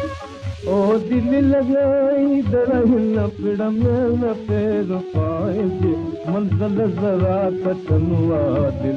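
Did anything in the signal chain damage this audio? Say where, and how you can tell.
Yes. From 1.02 s to the end, de-emphasis was applied wrongly, likely at a processing stage that added a treble cut to audio never pre-emphasised. The sound turns dull and muffled, about 11 dB down at 10 kHz against 1 kHz. The top end slopes away smoothly rather than stopping at a sharp low-pass cut-off.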